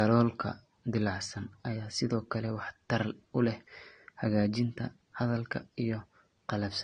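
Speech with a hard top at about 9.7 kHz throughout, plus smeared, swirly high-band artefacts of two different kinds layered together. That points to transcoding between lossy codecs, likely a low-rate AAC-LC encode re-encoded to Vorbis, which fits roughly 32 then 51 kbit/s.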